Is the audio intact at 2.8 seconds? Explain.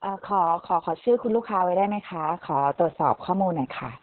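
No. At 2.8 seconds, as across the whole clip, the speech has gone through Opus voice compression running its SILK linear-prediction coder at a very low rate, consistent with about 6 kb/s and long frames. The band is cut to narrowband, so nothing above about 4 kHz survives, and the excitation is coded coarsely. The damage is heavy: the speech sounds muffled, hoarse and somewhat robotic.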